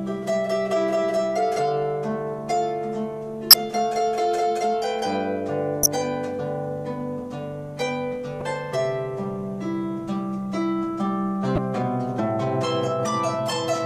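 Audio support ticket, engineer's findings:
Damaged data in compressed stream. Short glitches at 3.50–3.54 s, 5.83–5.86 s, 8.40 s, 11.55–11.58 s. Decoder misreads corrupt frames, loses sync, resyncs on next header.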